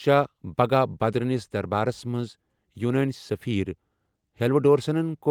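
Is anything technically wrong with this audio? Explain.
No, nothing is technically wrong with this audio.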